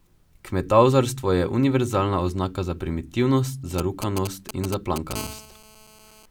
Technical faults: GSM signalling bursts; GSM phone buzz

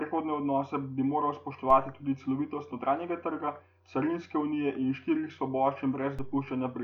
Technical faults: DC step

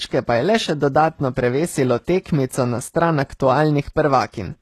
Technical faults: HE-AAC compression

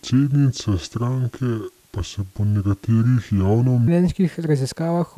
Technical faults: wrong sample rate

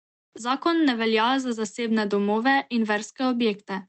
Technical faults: none

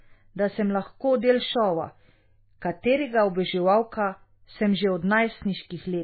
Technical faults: MP3 compression

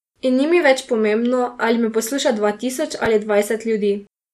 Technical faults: MP2 compression; chunks out of order

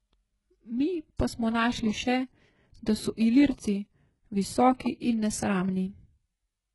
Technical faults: HE-AAC compression; pre-echo

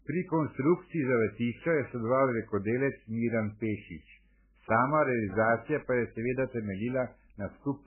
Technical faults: MP3 compression

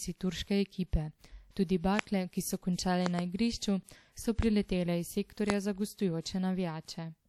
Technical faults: loud pop

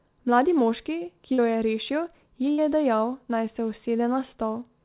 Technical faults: short concealed packet loss; burst of packet loss

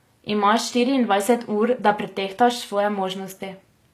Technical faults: HE-AAC compression

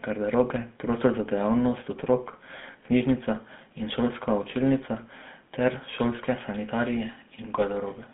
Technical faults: GSM full-rate codec

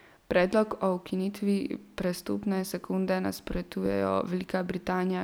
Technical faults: repeated buffer

